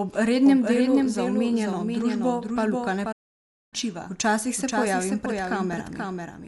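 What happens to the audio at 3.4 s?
A playback stall runs from 3.12 to 3.74 s, about 0.6 s of silence cutting into the speech mid-flow. The player likely ran short of data or had its thread blocked, so output dropped out until it recovered and resumed.

Around that moment a doubled audio track is also present. A second full-band copy trails the original by roughly half a second at about 5 dB lower, dry and without room colour, likely from a slower second capture path or two misaligned copies in an edit.

Dolby Digital compression colours the same stretch. The band is narrowed, so the speech is dull, and a rough, fluttering noise surrounds tonal parts. This likely comes from a low-bitrate AC-3 encode, which fits 64 kbps, where starved frequency lines are filled with dither noise.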